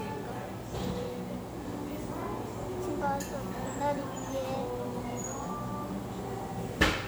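An everyday sound recording with low bit depth without dither audible from start to finish. Quiet passages turn gritty. The faintest parts sputter or drop to silence. The error floor sits about 25 dB below the signal. The audio uses 8 bits. The likely cause is plain rounding to that depth with no dither, so the error stays locked to the sound.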